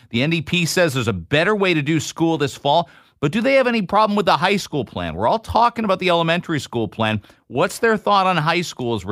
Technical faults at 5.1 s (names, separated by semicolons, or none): none